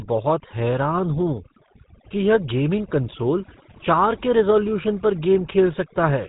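From start to finish the speech carries overdone noise removal: a noise reducer set too hard has pushed individual frequency bands down or out wherever they sat near its noise estimate, taking quiet speech detail with them. Pauses fall to near silence dotted with twinkling specks; a spectrogram shows a black background sprinkled with isolated bright dots and ragged, hollowed-out harmonics.

Also present for the whole clip is the GSM full-rate codec, with plainly audible damage. The speech has the gravelly, buzzy roughness of a vocal-tract model driven by a sparse pulse train, consistent with the 13 kbps full-rate coder. Content stops at about 3.8 kHz, which appears on a spectrogram as a flat ceiling with nothing above it.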